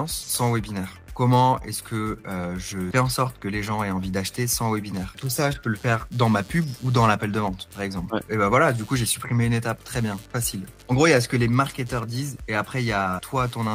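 From 4.94 s on, computer activity noise: load-driven ground disturbances add a buzz pulsing near 100 Hz that, unlike steady mains hum, follows computer activity.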